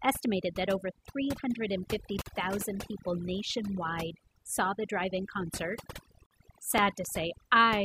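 Overdone noise removal runs throughout: an over-strong reducer mutes bands near its noise estimate, leaving twinkling specks, and a spectrogram background of isolated flecks on near-black.

At 2.22 to 2.26 s, just before "people nationwide saw the", a 43 ms gap at a join of encoded pieces appears. Untrimmed encoder delay and padding leave a flat waveform gap with smeared edges.

From 5.93 to 7.31 s, after "the drive in concert", six CD scratch ticks, up to about 5 ms each, appear as thin vertical spikes in the spectrogram. They mark unrecoverable data once per disc turn.

Within them, at 6.26 to 6.31 s, a second 49 ms join gap shows as another blank stripe. The joins recur every 4.0 s, which fits separately encoded 4-second pieces.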